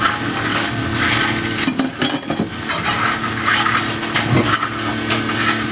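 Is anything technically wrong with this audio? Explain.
Yes. Gain pumping runs throughout, with the gain swinging by roughly 15 dB. The likely cause is input gain set far too high with a fast limiter clamping it. Unlike a noise gate, the floor rises smoothly rather than switching off, and loud and soft parts end up squashed close in level. The audio also stops at 4 kHz, which fits a narrowband call codec.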